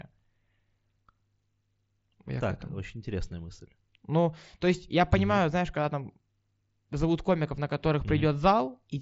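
No faults in this speech; it comes over a Bluetooth mSBC headset link, with nothing above about 7.7 kHz.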